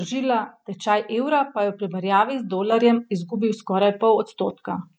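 At 2.72 s the speech abruptly gets louder by about 6 dB, background noise rising with it, and stays at that level to the end. This sudden gain jump likely comes from a digital gain change applied between two adjacent samples with no ramp.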